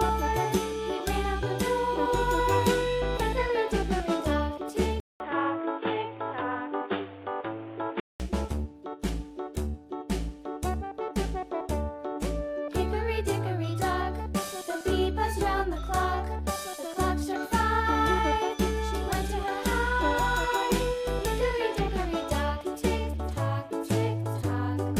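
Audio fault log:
5.0–8.2 s, input switched to a poorer device. A short gap of about 200 ms opens at 5.0 s. The sound then turns dull and boxy, with nothing above 3.8 kHz. A faint new background noise appears, roughly 30 dB below the signal. The level stays about the same. At 8.2 s the full band returns. The likely cause is the input moving to another microphone or a headset's call profile, which passes a narrower band.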